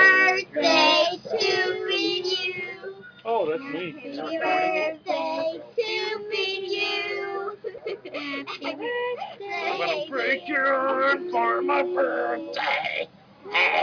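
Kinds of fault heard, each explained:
No faults can be heard anywhere in this audio.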